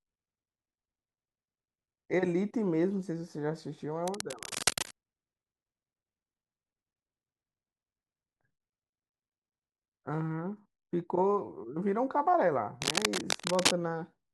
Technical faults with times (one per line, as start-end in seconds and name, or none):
4.07-4.91 cable scratch noise
12.82-13.79 cable scratch noise